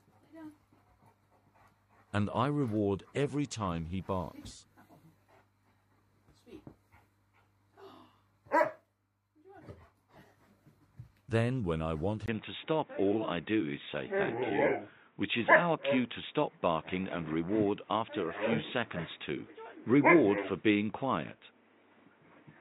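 Input switched to a poorer device at 12.26 s: after a 20 ms gap, the sound turns dull and boxy through to the end, with nothing above 3.8 kHz, a level shift of about 5 dB and a new background noise roughly 35 dB down, likely from a narrower-band microphone.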